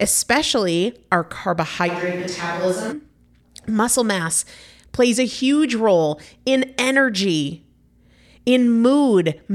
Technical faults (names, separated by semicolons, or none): switch to a distant microphone